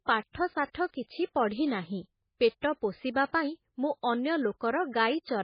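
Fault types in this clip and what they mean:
MP3 compression: heavy, likely low-bitrate MP3 coding strips everything above 5 kHz and lets weak frequency lines flicker between frames, giving the speech a watery, swirly quality. A spectrogram shows a flat ceiling at 5 kHz with patchy, blotchy energy below it.
Pre-echo: quantisation noise spread across a transform block leaks ahead of sharp onsets, so a short hiss precedes the attack, which sounds blunted. On the waveform and spectrogram, broadband smear appears before the onset: 58 ms at 1.03 s, 24 ms at 2.61 s and 3.14 s.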